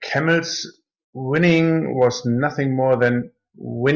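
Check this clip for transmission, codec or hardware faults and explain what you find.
No faults turn up anywhere in the clip. There is nothing to flag at any point in the speech.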